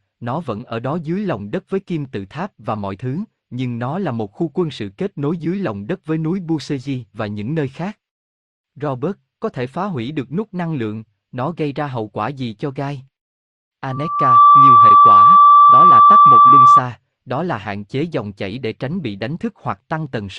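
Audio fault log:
13.89 to 16.82 s: loudspeaker feedback squeal. A steady tone at 1.2 kHz rises out of the speech and swells over about half a second. It then holds well above the speech, roughly 15 dB louder. The microphone is hearing its own loudspeaker. At this one frequency the loop gain passes unity, so the tone feeds itself and keeps growing. It stops just before "đó là hạn chế", where the loop is broken.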